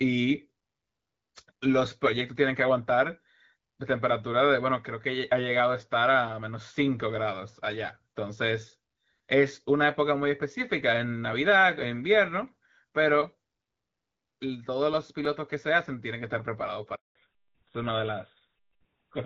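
At 15.25 s a repeated buffer occurs: fresh audio failed to reach the output in time, so the device replayed the block it had just played. That block lasts about 5.33 ms, which fits a 256-sample buffer, and it sounds twice with a hard join between the copies. Because the piece is so short, the repeat comes across as a small click or momentary buzz rather than an audible stutter, and essentially nothing of the speech is lost.

From 16.95 to 17.15 s there is a handover gap. The call was passed from one network to another, and no speech frames came through while the switch was made. The voice fades out within a few tens of milliseconds and then stays silent for 200 ms until the new link begins carrying audio. Whatever was said during that gap is missing.

At 17.15 s, as the new link starts, the call suffers a fallback to narrowband. It leaves the AMR wideband (HD Voice) codec, which until then carried speech with only light coding damage, and drops to an older narrowband codec, a switch that points to GSM full rate. 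From there to the end, nothing above 4 kHz remains, so the voice sounds duller and rougher, with the crisp upper detail of consonants gone.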